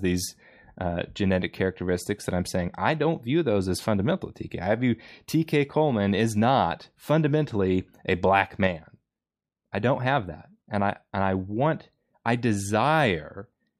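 No technical faults can be heard anywhere in the recording.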